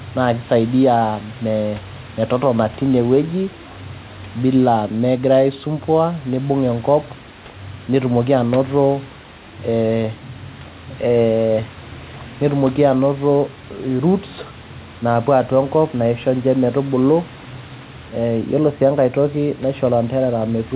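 No technical faults can be heard in this speech.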